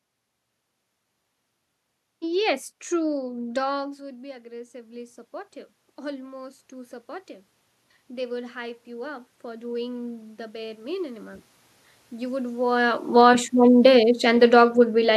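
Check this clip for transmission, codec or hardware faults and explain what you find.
The faults are all gain control. Automatic gain rising occurs twice, and automatic gain falling once.

From 3.17 to 7.37 s, automatic gain rising follows a drop of about 18 dB at the microphone as the talker moves back, near 3.5 s. The control adds about 9 dB, so voice and room noise swell together.

From 8.07 to 11.49 s it rises again, by about 7 dB, with the same joint swell.

From 13.04 to 15.12 s, automatic gain falling occurs. After the talker moves, near 12.5 s, the control trims about 3 dB. The sound sinks gradually with its background.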